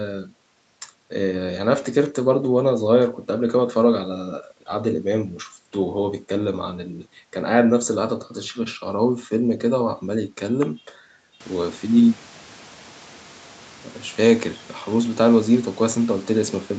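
No technical faults in this speech; the room's background noise steps up by about 17 dB a little after 11 s but stays about 27 dB below the speech, and the call microphone processing carries nothing above 8 kHz, as expected.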